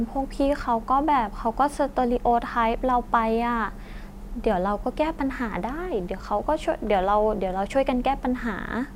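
No technical faults are audible.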